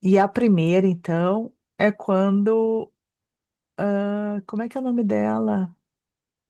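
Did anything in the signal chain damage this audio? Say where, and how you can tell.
Yes. Hard clipping damages the speech between 0.14 and 0.22 s, near the very start of the clip. The peaks there are driven about 2 dB past the ceiling of a converter or gain stage, so their tops are cut flat. The flattened waveform adds harmonics high in the spectrum. You hear it as a brief crackle on the loudest moments of that short span. The Opus coding at 24 kbps does only light damage.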